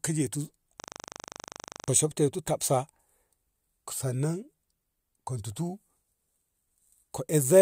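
At 0.8 s the speech locks into a system hang loop until 1.88 s. The machine or driver froze while the hardware kept replaying one 40 ms ring buffer. It repeats 27 times, a rapid 25 Hz rattling stutter. About a second of speech is lost.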